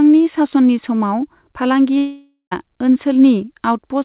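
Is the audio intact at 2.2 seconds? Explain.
No, 2.2 s falls inside a gap from 1.98 to 2.53 s, likely a long network dropout: the last sound smears into a fading buzz, then silence.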